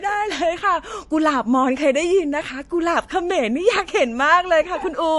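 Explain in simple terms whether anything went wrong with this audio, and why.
Yes, something went wrong. Across the whole clip the speech sounds dull and watery, with nothing above about 11.3 kHz, and the damage is easy to hear. The likely cause is MP3 compression at a low quality setting: the encoder cut off the treble and let quiet detail flicker in and out. A simple treble filter would sound dull too, but it wouldn't leave this swirly, watery quality behind.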